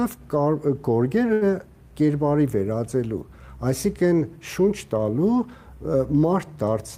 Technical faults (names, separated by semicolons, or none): short stall from a late packet